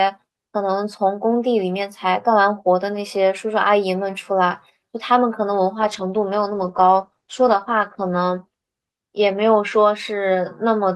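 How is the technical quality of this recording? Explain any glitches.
The recording has one clear glitch, a stretch of degraded speech in the middle of the clip.

From 5.81 s to 8.49 s there is a call bitrate drop. The encoder was given far fewer bits, so it coded the speech more coarsely and trimmed the high frequencies. The result sounds rough and muffled, which fits a fall from about 32 to 15 kbps. Unlike packet loss, nothing cuts out. The quality stays dulled for over two seconds and then recovers.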